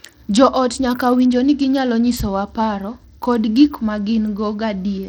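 Bluetooth SBC compression, throughout: the treble flickers and drops out under gritty noise, likely from a small bit pool, which fits roughly 80 kbps.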